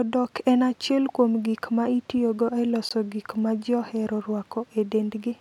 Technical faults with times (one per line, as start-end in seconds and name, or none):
2.89 Bluetooth stall